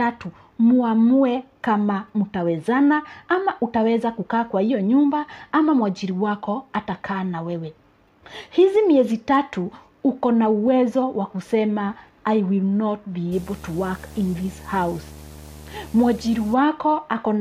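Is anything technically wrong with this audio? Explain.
Yes. Video or display buzz from 13.32 to 16.54 s: a screen or video cable couples into the audio, adding a 75 Hz field-rate buzz with hash above it, about 20 dB below the signal.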